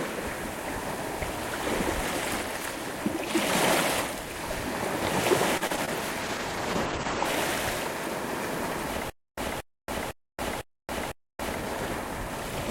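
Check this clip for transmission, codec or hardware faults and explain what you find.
Three separate faults are audible, all after the 5-second mark.

From 5.57 to 5.89 s the audio turns choppy, with small pieces dropping out. This is repeated packet loss (robotic sound): four short gaps, the longest about 37 ms, were patched by stretching the preceding sound, so roughly a third of that stretch is filled-in rather than real.

From 6.22 to 7.31 s the sound goes rough and muffled, losing its top end. That is a call bitrate drop: the encoder fell from 96 to 10 kbps for about a second, coding coarsely and cutting the audio band from 20 kHz down to 8 kHz.

From 9.10 to 11.55 s a 227 ms burst repeats five times at an even 506 ms pace, each followed by about 279 ms of dead digital silence. This stutter with silent gaps is likely a stalled player replaying its last fragment and then running empty, so the intended audio there is lost.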